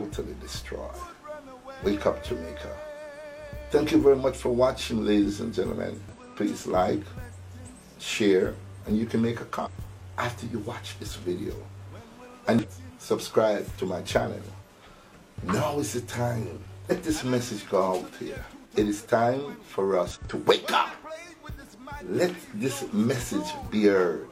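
Damaged data in a compressed stream at 6.09–6.15, 9.62–9.68, 12.59–12.65, 16.86–16.92 and 20.11–20.18 s: each roughly 60 ms stretch holds corrupted frames the decoder misreads, losing sync until the next frame header, so the sound breaks into a brief chirp or squawk.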